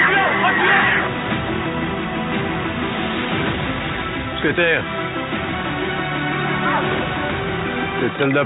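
Nothing goes wrong anywhere in this audio, so there's no technical fault to point out.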